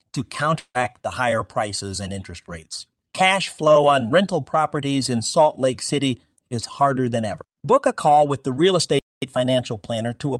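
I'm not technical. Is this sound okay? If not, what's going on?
No, there are two glitches in this speech.

From 0.59 to 0.78 s, just before "the higher prices and", the sound smears into a short fading buzz, then goes quiet briefly. That's likely a long network dropout: audio got lost in transit, the receiver papered over it, and that bit is gone.

From 8.99 to 9.22 s, the speech simply stops dead for about a quarter of a second, then carries on. That's a playback stall, likely the player running out of data or getting held up momentarily.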